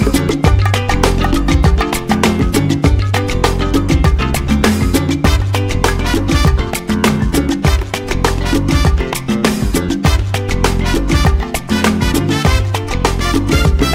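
Nothing in the audio points to a technical fault at any point in its duration.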